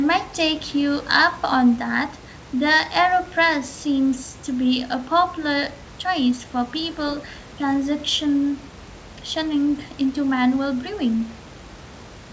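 No technical faults are audible.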